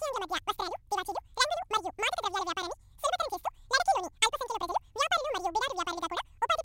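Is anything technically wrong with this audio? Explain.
Yes. Throughout the speech, the audio is read two samples at a time, so it plays at double speed. Each pair of samples is taken as a single frame, as if the data held two channels or samples twice as wide, so the playback moves through the material twice as fast and everything rises an octave (12 semitones). The speech sounds hurried and chipmunk-like. On a spectrogram, harmonics and formants sit at double their usual height. The waveform looks squeezed, with syllables and pauses at half their natural length.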